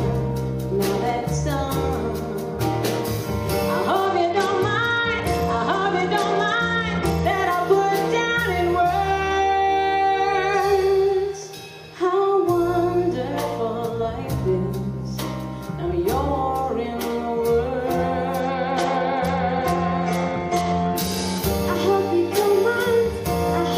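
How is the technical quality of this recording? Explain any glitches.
Two stretches let it down, both a Bluetooth SBC bit pool drop, from 4.06 to 7.25 s and again from 18.40 to 21.38 s. The link gets congested and the sender cuts the bit budget to keep audio flowing. The top sub-bands get starved and everything else is quantised coarsely. You hear the treble go dull and a gritty grain creep in until it recovers, which fits a fall from a bit pool of around 31 to about 12, roughly 88 kbps.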